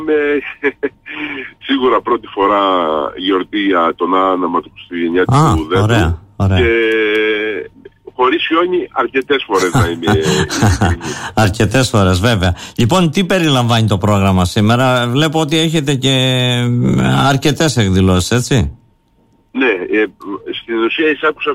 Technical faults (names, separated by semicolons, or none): none